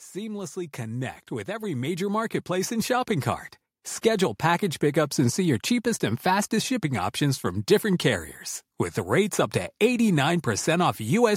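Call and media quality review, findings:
Automatic gain rising, 0.13 s to 3.17 s. Speech and background noise floor swell together by about 12 dB over three seconds. Probable component: AGC in the capture path. It judged the input too quiet and ramped gain up slowly, lifting everything at once.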